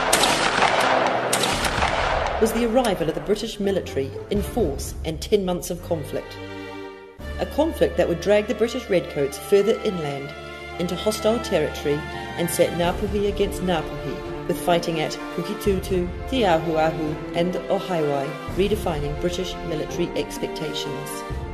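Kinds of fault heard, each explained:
Nothing here stands out as a technical fault; I heard no problems anywhere in the audio.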